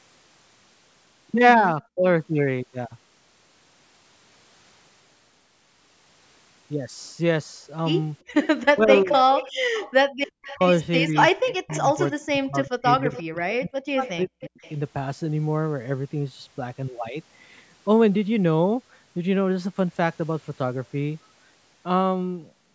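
At 1.92 to 2.02 s the speech drops sharply, by roughly 40 dB, for about a tenth of a second. This is speech suppressed in double talk. The likely cause is an echo canceller that heard both sides at once. It could not tell the talker from the loudspeaker echo, so it turned everything down.

From 8.33 to 10.64 s a second copy of the speech trails the first by about 354 ms. This is an echo leak, about 10 dB below the speech. It is likely a loudspeaker whose echo canceller let part of the signal back through.

Inside that stretch, 8.73 to 9.09 s brings another double-talk dip. It is milder, about 15 dB, and totals around 0.2 s.

From 9.58 to 10.19 s the room sound itself falls away, by about 35 dB, for roughly 150 ms in total. This is background gated by the echo canceller. It clamped the microphone while the loudspeaker played, then released it.

The longest trouble runs from 10.55 to 14.65 s. 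The speech is suppressed in double talk in pieces, about 2 s of it in all, with dips near 40 dB. Echo leaks return within it, each at about 354 ms delay. They fall at 11.49 to 12.1 s and 14.05 to 14.7 s, about 20 dB down, and briefly at 13.15 to 13.23 s, about 15 dB down.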